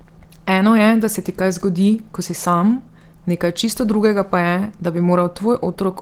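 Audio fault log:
throughout Opus compression: the speech sounds hoarse and rough, with plainly audible coding damage. This likely comes from Opus hybrid mode, fitting a 16 kbps stream.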